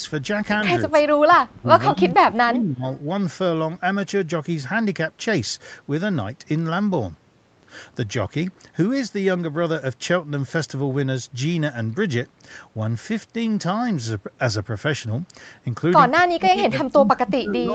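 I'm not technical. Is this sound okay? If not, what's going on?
No, it has two problems. At 0.53 to 0.63 s there's a brief echo leak: a faint copy of the speech arriving about 0.17 s late. That's likely the far end's loudspeaker being picked up by its microphone and sent back.

The other is speech suppressed in double talk. The speech dips or partly drops out at 0.86 to 0.97 s, 1.14 to 1.71 s, 1.9 to 2.84 s, and from 16.14 s to the end. It's likely the echo canceller ducking the speech while both sides talk.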